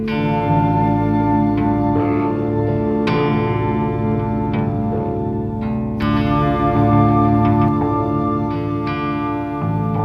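The audio carries a doubled audio track from 6.02 to 7.68 s: a second, full-band copy trails the original by around 150 ms at about 5 dB lower, with no decay or room colour, and it switches on and off abruptly. The likely cause is either the signal being captured again through a slower path or an edit leaving two copies out of step.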